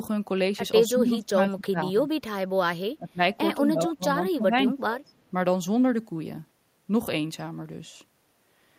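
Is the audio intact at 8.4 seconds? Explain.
Yes, the audio is intact at 8.4 seconds, with no dropout, click or distortion to be heard.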